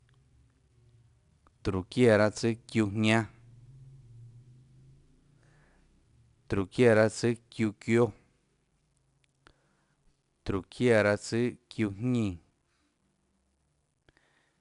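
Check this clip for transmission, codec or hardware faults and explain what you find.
One codec fault is present, and it runs through the whole speech recording.

4-bit ADPCM compression, throughout: every sample is coded as a 4-bit step away from a predicted value, with the step size adapting as it goes. The resulting error is noise that rises and falls with the signal, so each louder syllable carries a gritty hiss, and sharp onsets distort where the step cannot grow fast enough. Nothing reaches above 10.6 kHz, which dulls the top end and fits a stream of about 89 kbps at roughly 22 kHz sampling.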